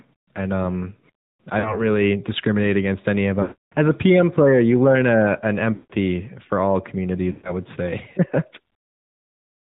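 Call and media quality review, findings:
AMR narrowband mobile codec: buzzy, synthetic speech throughout, nothing above 4 kHz. AMR-NB with 8 kHz sampling and a pulse-driven vocal tract model; the plainly audible damage fits the 10.2 kbps mode.

Lost AMR speech frames: drawn-out, warbling sound fading toward silence at 1.60–1.84 s (after "and um I", about 40 ms lost), 3.42–3.74 s (about 300 ms lost), 5.74–5.92 s (after "you learn a an", about 160 ms lost), and 7.32–7.54 s (after "for all", about 120 ms lost). Radio-corrupted frames failed the checksum, and the decoder repeated the last good pitch and vocal tract settings at falling gain.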